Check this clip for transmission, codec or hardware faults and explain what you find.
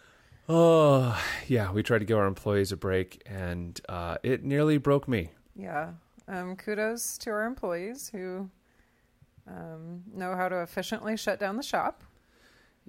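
No transmission, codec or hardware faults.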